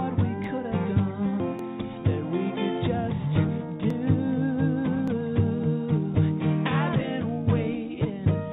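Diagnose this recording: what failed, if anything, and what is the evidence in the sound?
Dropped samples occur at 0.44 s, 1.59 s, 3.90 s and 5.08 s. Each is a single sharp click, a thin vertical line in the spectrogram that stays visible even though the G.711 A-law path leaves nothing above 4 kHz. Well under a millisecond of audio is missing at each point, so the waveform jumps straight to a later value and no sound is lost. The likely cause is the driver or buffer stage briefly losing a handful of samples.

A skip ahead happens at 1.40 to 1.42 s, at the network and jitter-buffer stage. Playback jumps forward with no gap and no fill. About a second of audio is simply absent, and the material on either side of the cut is joined almost directly. This is queued audio dropped, either in transit or by the buffer, to shed roughly a second of delay. The abrupt join, with no silence or concealment, is the evidence.

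A jitter buffer speed-up runs from 3.48 to 4.97 s, in the call-processing stage. The audio plays at about 105% speed with no change in pitch and has a hurried feel. The receiver was holding more audio than its target, so it cut many short pitch-period-sized pieces in succession to remove about a tenth of a second of delay. Steady timing compressed over that span while pitch holds is the evidence.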